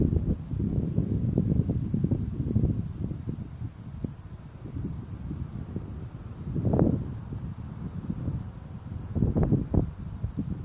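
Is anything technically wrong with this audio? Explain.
No, nothing technically wrong is audible in this recording.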